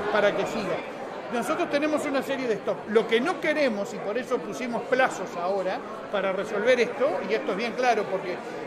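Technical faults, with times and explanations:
No technical faults detected; nothing to log at any point in the clip.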